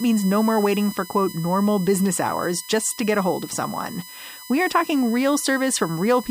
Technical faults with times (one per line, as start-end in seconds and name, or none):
0.00-6.30 USB whine